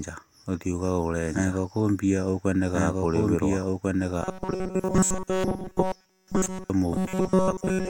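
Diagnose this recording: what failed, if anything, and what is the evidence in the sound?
A second capture path, likely a slower duplicate route in the driver or mixing stage, feeds the same speech back in. Throughout the recording, a full-band copy trails the original by about a second and a half at roughly equal level, producing a doubled audio track with no room colour.

The capture buffer, likely starved at the driver level, repeats short fragments in place of fresh audio. From 4.22 to 6.70 s, and again from 6.95 s to the end, this produces robotic sound from repeated short buffers: a rigid 188 Hz buzz, fitting a buffer of about 5.3 ms. The first stretch is almost entirely repeats, the second mostly repeats.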